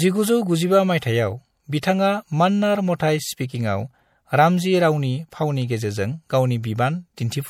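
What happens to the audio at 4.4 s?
At 4.4 s the speech carries the same damage heard across the whole clip: plainly audible MP3 compression, likely from an encoder short of bits. Weak frequency lines drop in and out between frames. That leaves s sounds watery and swirly, with smeared attacks. The damage fits a low bitrate of about 64 kbps.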